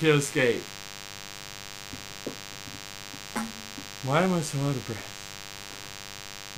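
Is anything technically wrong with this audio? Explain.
Yes. A DECT cordless phone buzz runs throughout: radio bursts every 10 ms get rectified into a thin, harmonic-rich 100 Hz buzz, roughly 15 dB below the sound. It is harsher and more rasping than smooth 50 or 60 Hz mains hum.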